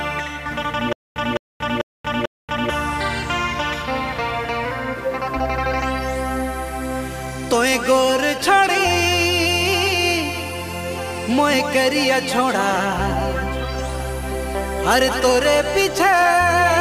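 From 0.93 to 2.70 s there is a stutter with silent gaps: a 210 ms burst of the sound repeats four times, each followed by 232 ms of dead digital silence, a steady 443 ms cycle. This is likely a stalled stream replaying its last buffer. Unlike random dropouts, the identical fragment returns at an even pace.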